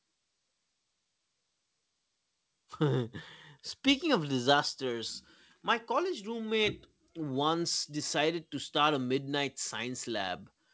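Nothing goes wrong anywhere in this speech recording.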